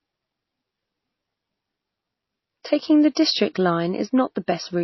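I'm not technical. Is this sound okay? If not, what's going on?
No. The whole recording has a dull, watery quality with no crispness above about 5.8 kHz, so s sounds lose their edge and swirl. That is likely MP3 compression, which discards high treble and faint detail to save space.

At about 3.15 s there is pre-echo, a brief hiss just ahead of a sharp sound. The compression spreads its noise across a short stretch, so it lands in the quiet moment before the attack and softens it.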